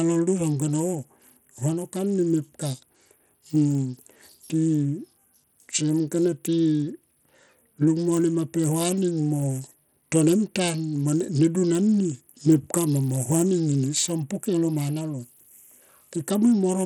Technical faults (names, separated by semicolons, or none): Bluetooth SBC compression